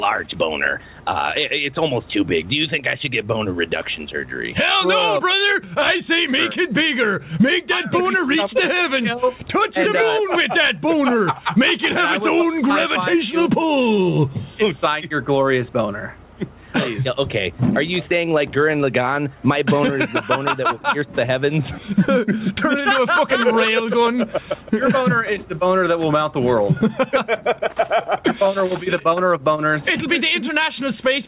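Throughout the clip there is gain pumping: the input gain is likely set far too high for the microphone, so a fast limiter or compressor clamps it down on every loud sound and lets it recover in the pauses. The level swings by roughly 15 dB. The result is flattened, squashed dynamics, all inside a band that stops at 4 kHz, consistent with a G.711 A-law call path.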